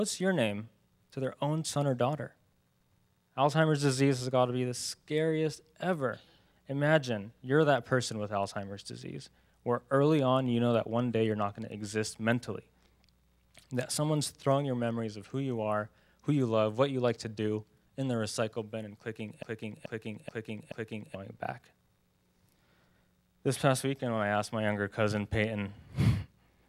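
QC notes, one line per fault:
19.43–21.15 s: broken-record loop. A 0.43 s fragment plays four times back to back with identical level and timbre, and the audio due in that span never arrives, likely a stalled player or stream resending its last fragment. Echo would decay instead.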